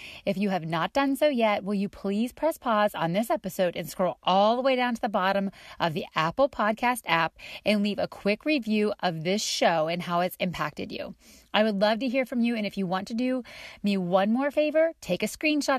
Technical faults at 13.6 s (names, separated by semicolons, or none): damaged data in a compressed stream